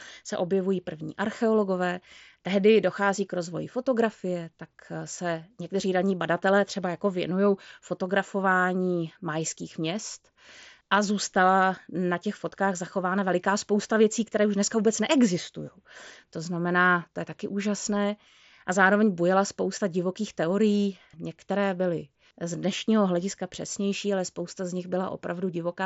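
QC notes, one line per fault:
No faults are heard anywhere in the speech. It comes through a Bluetooth mSBC headset codec, which keeps the band up to 8 kHz and leaves a light graininess on the louder moments.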